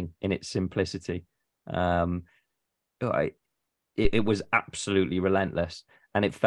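A speech clip with a phantom power thump from 4.05 to 4.41 s: a deep thud peaking at about -13 dBFS that falls away within 81 ms, as a supply step passes through the input's coupling capacitors. It is a single clean electrical pulse, without the rustle of a handling bump.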